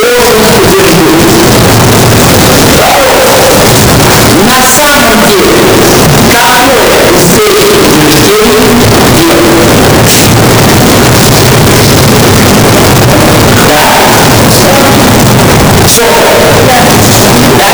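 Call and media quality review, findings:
Signed and unsigned mixed up, whole clip. Wall of harsh, clipped-sounding distortion start to finish; quiet bits blare as loud as everything else, no real dynamics left. Probable component: format handling at capture or decode, likely a 16-bit PCM sign mismatch. Mechanism: top bit flipped, so every zero crossing slams rail to rail. Worth checking the sample format flag first.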